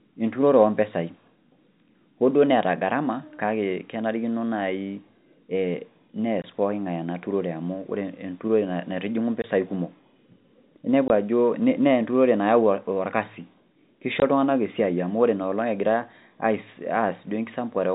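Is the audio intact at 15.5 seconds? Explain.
Yes, at 15.5 seconds the speech is intact, carried cleanly through the band-limited G.711 telephone coding with no dropout, click or distortion at that point.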